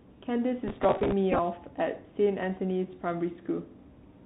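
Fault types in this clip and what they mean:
Bluetooth CVSD headset codec: narrowband one-bit delta coding, nothing above 4 kHz, spectrogram cut flat there, granular hiss filling gaps, scratchy sibilants throughout.
Processor overload crackle: missed deadlines on roughly 3 ms buffers repeat stale audio with hard edges, gritty tearing from 0.68 to 1.12 s, dense waveform discontinuities.
Bluetooth headset packet repeated: lost packets re-decoded from the previous one, brief buzz and ticks from 1.32 to 1.39 s, short repeating blocks in waveform.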